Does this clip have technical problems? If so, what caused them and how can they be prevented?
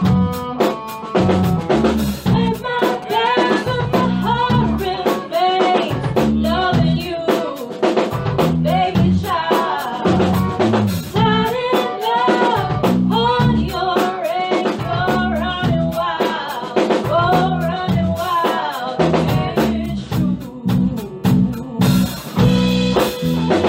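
Yes. From 1.61 to 3.51 s there are GSM signalling bursts: a galloping run of ticks and short buzzes at 217 Hz, roughly 15 dB below the signal. A nearby 2G phone was exchanging short radio bursts with the network. The audio circuit rectified them. Keep phones switched off or in flight mode near the equipment.

From 3.59 to 5.46 s a steady GSM phone buzz follows, about 26 dB below the signal. It is a hard, raspy 217 Hz tone with many harmonics. The phone was transmitting in bursts 217 times a second, as in a call, and the circuit demodulated each pulse. Shielded cables and more distance from the phone prevent it.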